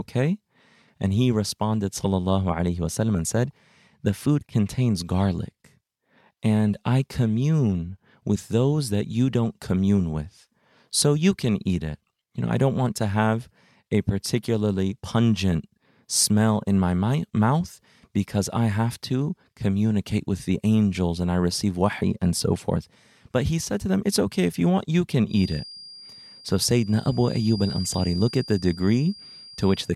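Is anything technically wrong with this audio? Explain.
Yes, there's a feedback whistle. Right after "you want you can", at 25.25 s, a thin, steady tone at 4.8 kHz appears and runs to the end of the clip, sitting roughly 20 dB under the speech and swelling and fading slowly in level. The likely cause is the loudspeaker-to-microphone loop hovering just at the edge of feedback, so that one frequency keeps ringing without running away into a full howl.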